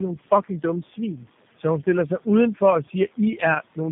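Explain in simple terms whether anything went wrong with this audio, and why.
Yes, something went wrong: tandem speech coding. The call passed through three phone speech coders in a row, each squeezing the already squeezed result again. From start to finish the speech sounds rough, muffled and warbly, with nothing above 3.7 kHz.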